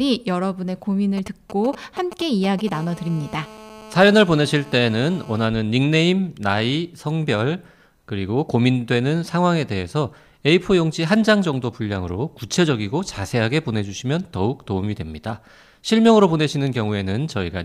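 From 1.17 to 2.69 s, GSM signalling bursts break into the speech. A nearby 2G phone's radio pulses get rectified. They sound like galloping ticks and short 217 Hz buzzes, roughly 15 dB below the speech.

From 2.72 to 5.47 s, a steady GSM phone buzz follows. Call transmission at 217 Hz is rectified into a hard, raspy tone, about 21 dB below the speech.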